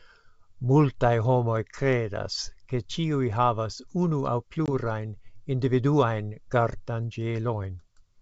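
At 4.66 to 4.69 s the speech drops into a hard-edged gap of about 20 ms, about one packet's worth. It then returns slightly distorted. This is packet loss on an ADPCM call. The silence let the decoder's adaptive predictor and step size drift from the sender's until they resynchronised. Elsewhere the G.722 wideband telephone coding stays clear up to 7 kHz, which fits its top 64 kbit/s mode.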